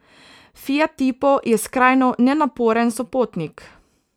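Speech recording, with nothing technically wrong with it.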